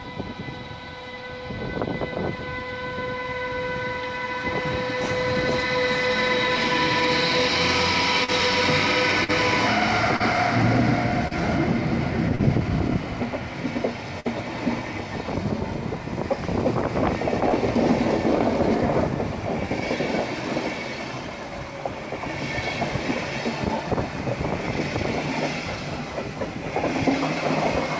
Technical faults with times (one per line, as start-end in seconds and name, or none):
8.24-8.31 short concealed packet loss
9.24-9.31 short concealed packet loss
10.16-10.23 short concealed packet loss
11.28-11.34 short concealed packet loss
12.35-12.42 short concealed packet loss
14.20-14.28 burst of packet loss
17.49-17.56 short concealed packet loss